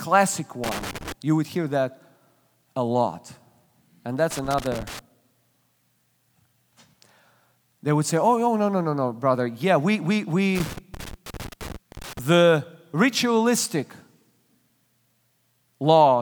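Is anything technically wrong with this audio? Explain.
Yes. Loose connector crackle occurs at 0.64 to 1.12 s, 4.31 to 4.99 s and 10.55 to 12.19 s. A worn or dirty contact repeatedly makes and breaks, chopping the speech signal, heard as irregular bursts of crackle and scratching, with the last burst the longest.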